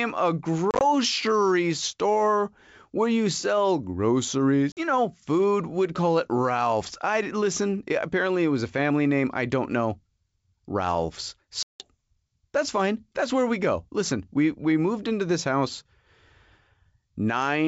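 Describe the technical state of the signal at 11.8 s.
At 11.8 s there is packet loss on an ADPCM call: 11.63 to 11.89 s, a hard-edged silent hole of about 170 ms where the decoder's adaptive predictor loses sync.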